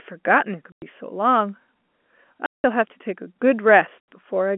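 At 0.72 s, 2.46 s and 4.0 s the speech drops out completely for 100 ms, 180 ms and 80 ms. This is packet loss filled with silence. All three gaps are multiples of 20 ms, which fits lost 20 ms packets. The receiver played nothing in their place, so each hole has hard edges. On the waveform these are flat silent stretches with abrupt edges. On the spectrogram they are blank vertical bands cutting through speech that stops near 3.4 kHz.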